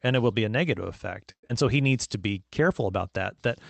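At 1.31 s, right after "negative effect", the audio turns into a smeared, fading buzz that continues the last sound, then drops to silence until 1.51 s, when speech resumes with "so he". This is most likely a long network dropout. With no packets arriving, the receiver filled the gap by stretching the last sound for roughly 180 ms, faded it, and then left about 80 ms of silence. About 80 ms of the original speech is lost outright. A brief glitch would leave a click or a short stutter. Here the decaying synthetic tail and the missing audio show a genuine outage, which also pushed the playout delay up by about 50 ms.

From 1.82 to 2.19 s, just after "so he", the speech drags. It runs at about 89% of normal speed with unchanged pitch, and it has a drawn-out quality. This is a jitter buffer slow-down: the receiver rebuilt its reserve by repeating single pitch periods over and over, adding about 47 ms of audio in total. 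A dropout removes material and leaves silence. This fault loses nothing and instead stretches the audio in time. The whole clip sounds band-limited to about 8 kHz, which fits an Opus call path.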